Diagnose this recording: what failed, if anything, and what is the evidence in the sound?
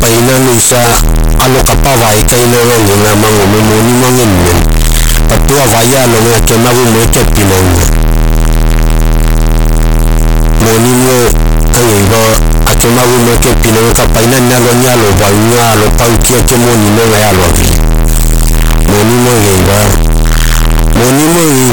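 The failure is at the sample-format conversion stage, and it affects the speech from start to finish. The whole recording is extremely loud and harsh, the waveform sits nearly square at an almost fixed, high level, and the background noise is as loud as the speech, yet the pitch can still be followed. This points to float read as integer: 32-bit float samples were likely read as 32-bit integers, so the sign and exponent bits dominate each value regardless of the original level.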